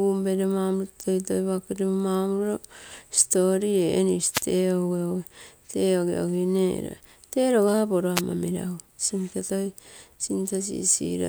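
A wireless microphone noise hit occurs at 4.31 to 4.43 s and again at 8.15 to 8.22 s, each a brief swish of static lasting about 120 ms and then 64 ms. The radio link from the analogue FM microphone momentarily faded as reflected signals cancelled the direct one, so the receiver's own noise rose up through the audio before the signal recovered.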